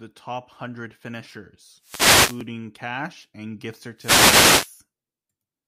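A wireless microphone's FM signal fades twice in this speech clip, causing wireless microphone noise hits: bursts of static swish over the sound from 1.79 to 2.46 s, between "top hundred finishers" and "cash and gift", and again from 3.96 to 4.74 s, after "cash and gift".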